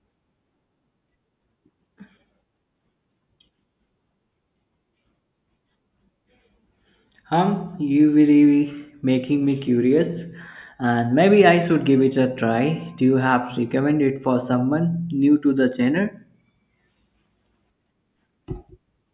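Speech recording, no audible faults.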